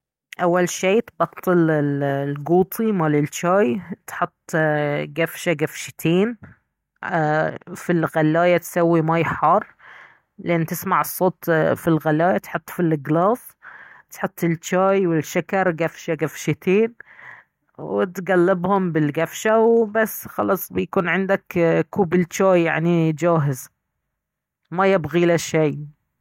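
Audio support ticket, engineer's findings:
Clock slip clicks, 0.13 s to 26.19 s, through the whole speech track. Faint regular ticking, about every 30 ms, blurring into a soft rattle on loud sustained passages and gone in silences. Likely cause: two unsynchronised device clocks around 700 ppm apart, dropping or repeating one sample per slip. Spectrogram: thin broadband vertical lines at even spacing, visible only where the signal is strong. Waveform: single-sample steps in otherwise smooth cycles.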